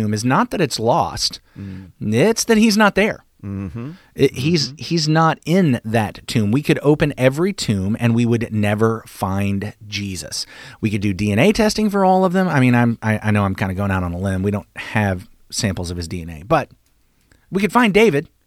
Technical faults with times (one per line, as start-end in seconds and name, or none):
4.42-5.42 channel delay (comb filtering)